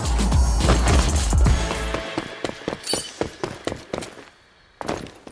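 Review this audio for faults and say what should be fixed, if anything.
Nothing in the audio needs fixing, as no faults are audible.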